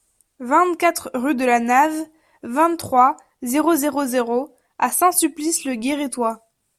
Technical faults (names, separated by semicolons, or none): none